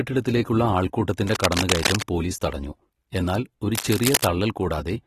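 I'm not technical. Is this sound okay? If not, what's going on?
No. Throughout the speech there is plainly audible compression damage, most likely from AAC compression, the kind used for online audio and phone apps. Saving the recording into too small a file forces the encoder to discard detail, and that loss can be heard.

Cable scratch noise appears twice: from 1.27 to 2.03 s, a little quieter than the speech, and from 3.75 to 4.27 s, about as loud as it. The likely cause is a worn cable or connector being moved, which makes scratchy, rustling bursts over the sound.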